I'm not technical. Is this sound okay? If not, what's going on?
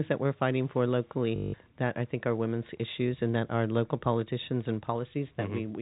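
No. From 1.36 to 1.54 s, just after "that we're fighting for" and before "that I think are", a short robotic stutter replaces about 0.18 s of speech. This is packet loss with last packet repeated: pieces of the call went missing, and the phone replayed the last good piece over and over until new audio arrived. The pieces seem to be about 20 ms long, so the repeats give a rough buzz. The dull, phone-line sound of the whole clip comes from the ordinary telephone format.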